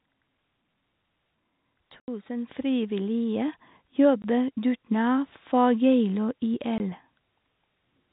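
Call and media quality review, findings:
Packet loss filled with silence: hard-edged holes. At 2.00 to 2.08 s the gap is 80 ms, which fits four consecutive 20 ms packets. Single 20 ms dropouts follow at 4.22 to 4.24 s and 6.78 to 6.80 s. Component is the receive-side jitter buffer or decoder, which played silence instead of concealing the loss. The sound steps instantly to nothing and back.

Microphone volume stepped up: sudden level jumps mid-stream, with the voice and the background rising together. At 2.46 s there is an abrupt rise of about 7 dB. At 5.52 s there is a smaller rise of about 1 dB. Component is the client's automatic gain control adjusting the capture device's input volume in single steps rather than smoothly. The G.711 A-law telephone band carries these jumps through unchanged.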